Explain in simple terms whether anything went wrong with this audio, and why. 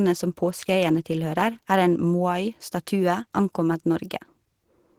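Opus voice compression squeezed the speech too hard for the whole clip and coded its fine detail coarsely, so the speech sounds hoarse, grainy and a bit robotic.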